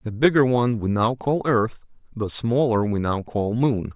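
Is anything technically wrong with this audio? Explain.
No, nothing technically wrong turns up anywhere in this speech recording.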